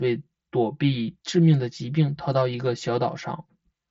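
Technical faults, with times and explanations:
Throughout: channel delay (comb filtering). One channel arrives roughly 5 ms late, and the two are summed to mono. Shared sound cancels at evenly spaced frequencies, from around 100 Hz upward. Fixed notches result, so the speech sounds hollow and phasey within the headset's band, which stops near 7.8 kHz.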